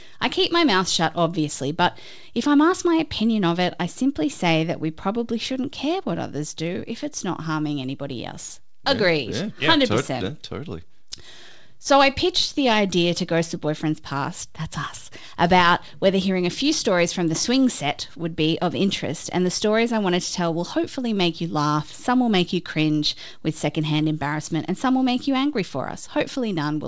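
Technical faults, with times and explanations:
No technical faults can be heard anywhere in this speech.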